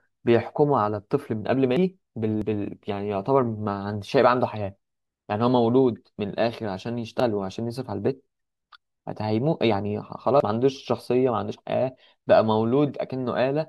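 At 1.77, 2.42, 7.2 and 10.4 s the speech jumps ahead, likely a dropped buffer (overrun): about 0.15 s vanishes at the first and about a tenth of a second at each of the others, with no silent gap as in a dropout.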